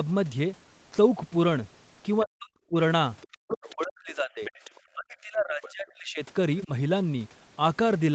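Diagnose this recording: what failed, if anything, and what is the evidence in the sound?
Speech suppressed in double talk, in the call processing stage. The talker's speech drops away at 2.22–2.75 s, 3.33–4.51 s, 4.95–6.22 s and briefly at 6.65 s. The dips reach roughly 40 dB, shallower later. The echo canceller likely ducked the near talker during simultaneous speech.

Other side's voice leaking through, also in call processing. A faint second voice appears at 3.22–3.37 s, 3.69–3.84 s, 4.45–4.8 s and 5.63–5.72 s. It sits roughly 15 to 30 dB below the speech. This is likely residual loudspeaker echo the canceller failed to remove.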